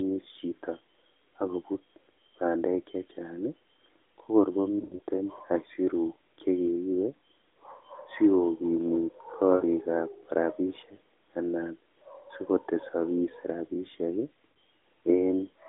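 A speech clip over an AMR narrowband mobile link, band-limited to about 250 Hz to 3.6 kHz with only light codec colouring, and it has lost AMR speech frames in three places. From 4.80 to 5.01 s, just before "aisiruk chekeibe", about 140 ms drops out across a 200 ms stretch, the longest gap 80 ms, so the sound smears and sags. At 9.56 to 9.64 s (60 ms) and 14.52 to 14.56 s (40 ms) there are brief warbly dips, as the decoder keeps replaying the last good frame at falling gain.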